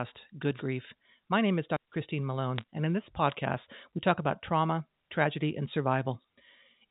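At 0.55 s the radio link of an analogue FM wireless microphone dips into a fade, with reflected signals briefly cancelling the direct one until about 0.62 s. As the carrier weakens, the receiver's own noise climbs up through the audio. This wireless microphone noise hit comes across as a quick swish of static lasting well under a tenth of a second, roughening and partly masking the speech while the signal recovers.

From 2.58 to 2.64 s the digital phone line carrying the G.711 A-law signal delivers corrupted data: bit errors flip individual bits, at a rate of somewhat under one percent. Each flipped bit changes one 8-bit sample, and errors landing on the sign or upper bits throw that sample far from its true value. The result is a short cluster of sharp ticks and crackle laid over the speech, which is still heard beneath them, consistent with a handful of damaged frames. Throughout, the speech keeps the telephone band's ceiling at 4 kHz.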